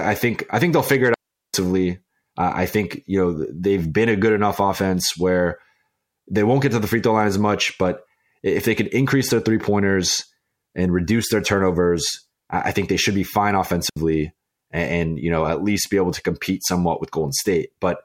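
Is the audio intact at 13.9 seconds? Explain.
No. At 13.90 s, just after "they should be fine", there is a digital wireless dropout: the radio link loses too much data to reconstruct, so the receiver mutes its output with a very fast fade rather than passing on corrupted audio. The speech drops into a clean hole of near silence lasting about 70 ms, until 13.97 s, with no crackle, hiss or noise burst at either edge before the sound resumes.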